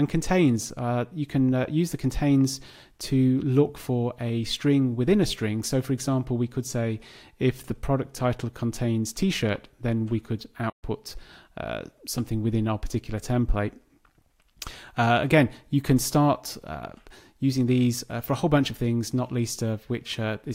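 At about 10.69 s the sound just drops out for around 125 ms, then picks up again by 10.84 s. That's a playback stall, with the player likely starved of data or its thread held up briefly, leaving a short, clean hole in the flow.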